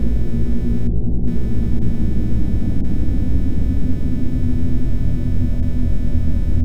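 Throughout the clip, computer activity noise runs under the everyday sounds. It is a faint buzzing, chirping texture, pulsing at around 300 times a second. It sits roughly 35 dB below the wanted sound, so it is quiet. It does not follow the sounds themselves. The computer's changing load is disturbing the ground shared with the audio circuit, and that interference leaks into the recording.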